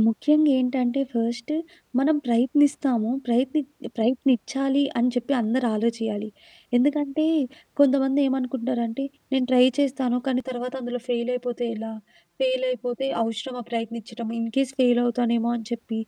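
From 10.40 to 14.54 s the speech turns hollow and phasey. This is channel delay, heard as comb filtering. One channel runs late by roughly 5 ms, and the two channels are then summed to mono. Whatever both share cancels at evenly spaced frequencies. The first notch sits near 100 Hz, with more spread regularly above it. The notches stay fixed, so the voice sounds thin and slightly tubular until the section ends.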